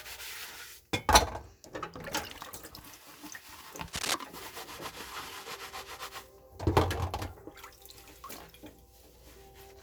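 From 3.88 to 4.15 s, a dense, uneven scratching and rustling sits over the sound, roughly as loud as the sound itself. This is cable scratch noise, likely from a worn cable, connector or control being moved so its contact resistance jumps about rapidly and injects bursts of noise.

From 4.69 to 6.02 s, the top end turns slightly dull and less airy. This is channel delay with comb filtering: one channel lags by a tiny amount, about a single sample, and when the channels combine, their shared content cancels, placing the first notch around 20 kHz.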